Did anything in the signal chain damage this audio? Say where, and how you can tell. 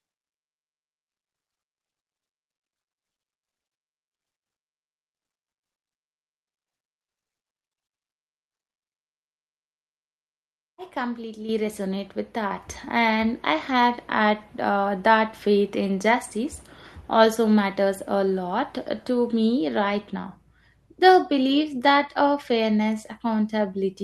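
Yes, there's a microphone volume stepped up fault, from call processing. At 11.49 s the whole signal jumps about 7 dB, then again about 4 dB at 12.51 s, with voice and background rising together. That's the call software's gain control nudging the mic input volume upward in discrete steps.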